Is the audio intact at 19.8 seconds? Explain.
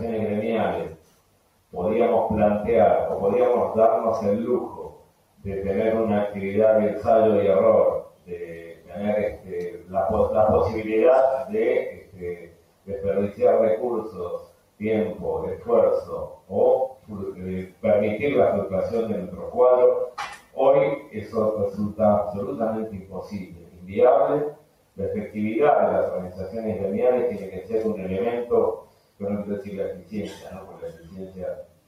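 No. A speech-style noise suppressor is acting on the whole clip, pumping steady and fading sound by around 10 dB while attacks pass, unlike a simple level change.

Between 19.3 and 21.36 s, the noise suppressor cuts the sound further, by about 11 dB at its deepest and for well under a second in all. Held sound and decays sink while sudden onsets survive, so it is not a dropout.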